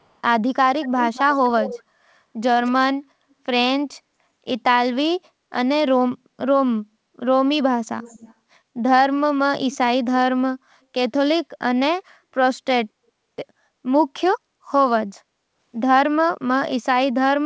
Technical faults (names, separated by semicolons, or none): echo leak